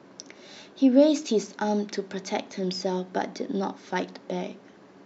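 Speech, with no technical faults audible anywhere in the recording.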